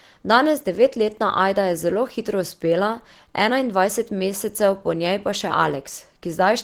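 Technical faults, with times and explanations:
Throughout, Opus compression: the speech carries a plainly audible coding texture, hoarse and muffled in its lower body while the top end sounds grainy and noise-filled rather than clean, with content reaching up to about 20.3 kHz. This is likely the Opus hybrid mode at work, where a speech coder handles the low band and the upper bands are rebuilt from folded or synthesised energy. The roughness fits a rate near 16 kbps.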